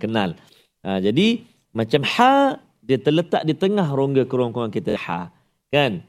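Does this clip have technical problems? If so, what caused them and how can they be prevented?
Yes. From 4.90 to 4.97 s the speech breaks into a short machine-gun buzz. This is Bluetooth stutter: late or lost packets made the receiver repeat its last slice, and about 46 ms of audio is skipped. Keeping devices close and away from 2.4 GHz interference prevents it.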